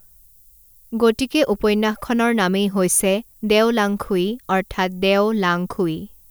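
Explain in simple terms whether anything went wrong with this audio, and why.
A steady, thin hiss runs under the speech from start to finish, brighter and stronger toward the top of the range. That is low bit depth with noise shaping. The audio has too little resolution, about 9 bits, and the rounding errors were pushed up into the treble.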